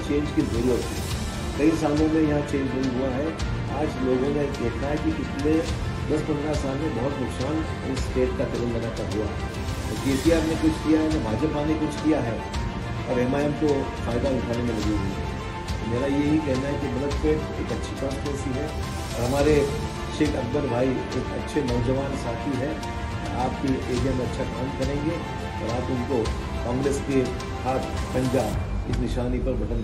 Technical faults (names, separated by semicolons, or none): none